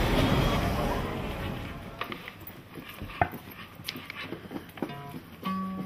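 No technical faults can be heard anywhere in this audio.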